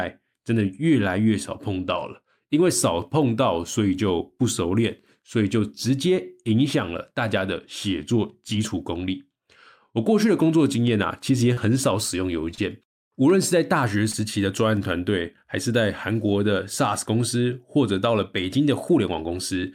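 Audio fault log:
11.53 to 11.59, 12.55 to 12.59 and 14.11 to 14.15 s: short concealed packet loss. About 40 ms, then 20 ms and 20 ms of speech failed to arrive in time, and the receiver bridged each hole by extending the preceding sound before easing back into real audio. That produces a brief smear or wobble rather than silence, which separates it from a plain dropout, and it lacks the sharp edge of a click.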